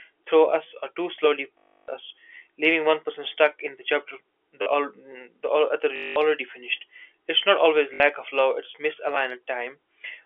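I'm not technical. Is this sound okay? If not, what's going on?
No, there are two kinds of glitch in this speech.

The first is packet loss with the last packet repeated. Chunks of audio went missing and the last one was replayed to fill the gap, so you hear a robotic buzz, about 50 repeats a second. That fits small 20 ms chunks. It happens at 1.58 to 1.88 s, between "us or too slowly" and "us leaving one person"; at 5.96 to 6.16 s; and at 7.94 to 8.0 s, between "it's not always" and "of love it's".

The second is a repeated buffer, where the playback device ran short of new audio and replayed a tiny slice. At 4.62 to 4.66 s, right after "stuck in the chapter", that slice plays four extra times, which sounds like a quick stutter and costs about 40 ms of speech. At 9.15 s it repeats once, a brief click. The slice length fits a 10 ms buffer.

The muffled, phone-line tone is just the normal telephone coding, G.711.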